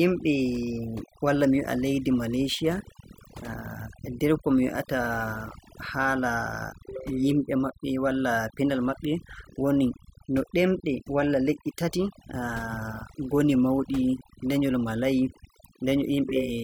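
It's a speech recording with overdone noise removal running the whole way through. The noise reducer was pushed too hard, so any frequency band sitting close to its noise estimate gets pulled right down or switched off. The gaps between phrases drop to near silence with little twinkling specks, and the quieter parts of the voice get eaten too.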